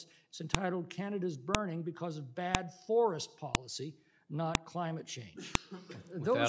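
Sharp, loud clicks land at 0.55, 1.55, 2.55, 3.55, 4.55 and 5.55 s, one every second. This is a file header played as audio: the stream was assembled from 1-second WAV pieces whose header bytes were never stripped, so each header plays as a brief burst of garbage samples.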